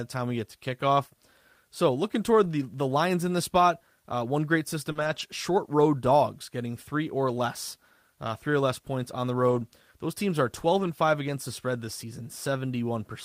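Around 2.43 to 2.45 s, just before "the the lines in", there's a lost packet rebuilt from error correction. The decoder played the low-bitrate backup copy carried in the next packet, so there's no gap, only a rougher, noisier 20 ms patch. The same thing happens at 6.09 to 6.11 s.

At 4.91 to 4.97 s there's a short concealed packet loss. About 40 ms never arrived, so the receiver extended the previous sound to fill the hole and then blended back, giving a brief smear or wobble. Rebuilt-from-FEC audio follows right after, from 4.95 to 5.21 s, leading into "short road". That stretch is about 140 ms of grainier sound, which points to several separate lost packets.

Two more rebuilt patches follow. One runs from 9.47 to 9.61 s, right after "less points on the", with about 80 ms reconstructed. The other runs from 10.79 to 10.89 s, about 60 ms. Both have the same coarse, noisy texture.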